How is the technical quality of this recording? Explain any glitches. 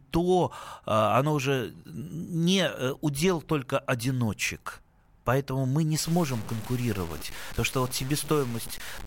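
The recording has one fault, in its final three seconds.

From 6.06 s to the end at 9.07 s, the speech turns grainy and gritty: low bit depth without dither, likely from truncation to about 5 bits. The error sits only about 15 dB below the signal. Quiet stretches sputter or cut to silence. Unlike steady hiss, this grit follows the speech and disappears in the pauses.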